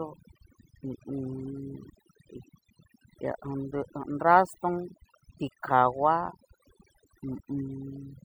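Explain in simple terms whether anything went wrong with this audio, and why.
Overdone noise removal runs through the whole recording: the pauses drop to near silence with twinkling specks.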